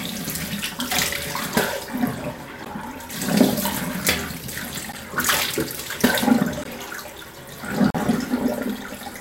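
Blocks of digital silence occur at 2.65, 4.92 and 6.64 s (12 to 16 ms each) and from 7.90 to 7.95 s (42 ms). The first two gaps fit a 512-sample buffer the program failed to fill in time. The cuts are abrupt, so the short blocks tick and the last leaves a brief hole.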